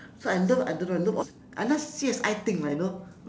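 Speech that jumps abruptly forward at 1.22 to 1.24 s, with no gap to mark the join, so roughly 0.7 s of talk is simply missing. This skip ahead happened because a stretch of audio was dropped, on the way or by the jitter buffer, while later audio was already queued. From 1.31 to 2.04 s and again from 2.49 to 3.26 s the speech sounds slightly rushed while keeping its pitch, running about 5% and then 7% fast. This is a jitter buffer speed-up: the receiver was holding too much audio and trimmed short pitch-period slices repeatedly, removing around 50 ms and then 70 ms to reduce delay. The call path's codec, which fits G.722 at 64 kbps, leaves nothing above 8 kHz.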